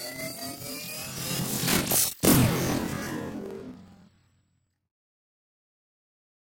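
A recording of everyday sound, with planar audio read as interleaved from start to finish. Each block stores one channel's samples and then the other's, but playback treats them as alternating left-right pairs. So every block is played twice at double speed, once per channel. The pitch sits an octave high throughout. A flutter runs through it at about 21.5 Hz, since each block lasts 46.44 ms. That fits a 2048-sample block.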